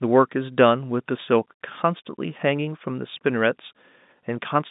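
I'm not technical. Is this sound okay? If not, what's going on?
Yes, nothing is wrong here: it has the narrow, slightly boxy sound of an ordinary landline call, because G.711 telephone coding, the standard landline format, carries nothing much above about 3.7 kHz, and that is exactly what a phone line is meant to do.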